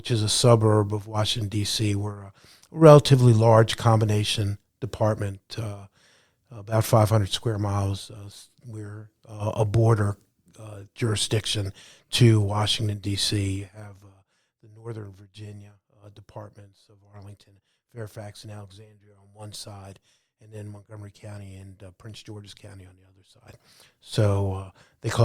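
From 13.52 to 13.88 s the speech carries zipper noise. The level drops by roughly 15 dB in 2 dB jumps, about thirty per second, with no smoothing. Each jump leaves a small click. Together they make a brief ticking buzz over the fade.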